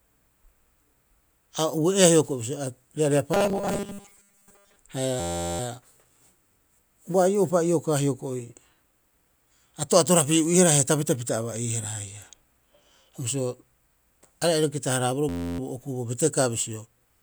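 From 3.34 to 4.76 s the speech takes on robotic sound from repeated short buffers. A rigid metallic buzz at 200 Hz appears while the syllables still roughly track. The likely cause is audio arriving too slowly, so the player refills the gap by replaying the last 5 ms segment. Most of the real audio in this stretch is replaced by those copies. On a spectrogram this shows as flat, evenly spaced harmonic lines at multiples of 200 Hz. The waveform repeats every 5 ms.

A system hang loop appears from 5.20 to 5.60 s and again from 15.29 to 15.59 s. The hardware kept cycling one 11.61 ms piece of its ring buffer while the system stalled, which fits a 512-sample buffer. The piece loops a few dozen times and produces a steady 86 Hz drone. Afterwards the speech resumes with essentially nothing skipped. The waveform shows identical copies stacked back to back, and the spectrogram shows a dense 86 Hz harmonic comb.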